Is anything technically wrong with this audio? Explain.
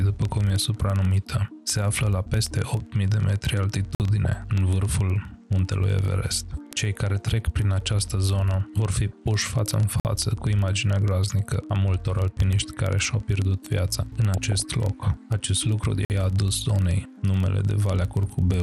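Yes, four kinds of fault are present.

Throughout, the sound is dull, with gurgling, granular distortion and flickering upper bands. The likely cause is MP2 compression at a low rate, which fits about 80 kbps.

From 0.13 s to the end, word clock ticks recur roughly every 30 ms. An unlocked receiving clock, off by several hundred parts per million, drops or repeats single samples.

A gap between chunks occurs at 3.95, 10.00 and 16.05 s. Each is a 50 ms hole at 6-second intervals.

DAB burbling occurs at 4.24 s, 6.95 to 7.45 s, 8.94 to 9.13 s, 14.34 to 14.60 s and 16.57 to 16.64 s. Bit errors corrupt samples, producing short blips of noise in single sub-bands.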